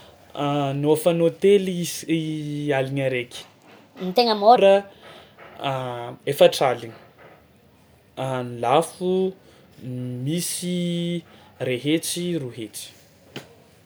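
A section at the wrong speed runs from 3.42 to 4.56 s, where the speech suddenly plays about 1.32 times faster than it was recorded. Because speed and pitch move together, the voice jumps up by roughly five semitones and sounds high and hurried, then drops straight back to its normal rate and register. The likely cause is that this stretch was played or edited against the wrong clock.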